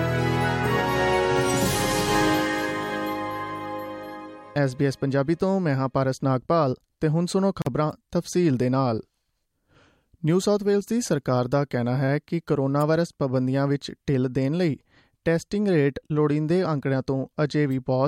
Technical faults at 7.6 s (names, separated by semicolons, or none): gap at a join of encoded pieces